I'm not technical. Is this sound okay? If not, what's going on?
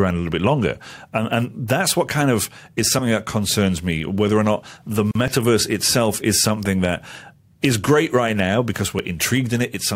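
No. At 5.11 to 5.15 s there's a gap at a join of encoded pieces: two separately saved chunks were stuck together, leaving a silence of about 40 ms before the speech carries on. At 5.28 s and 8.99 s you'll hear a tiny skip forward in the speech, a few milliseconds gone, most likely a dropped buffer (overrun), where the recorder didn't grab that audio in time.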